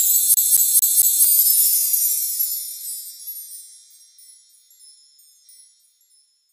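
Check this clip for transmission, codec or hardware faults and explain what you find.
A fast, even stutter runs from 0.34 s to 1.25 s: the same 226 ms slice of sound plays four times in a row, each pass cut off by a brief mute before it starts again. This is a CD stuck on one turn. A scratch at that point on the disc knocks the laser back one track every time the disc comes round to it, so playback keeps returning to the same short loop instead of moving forward.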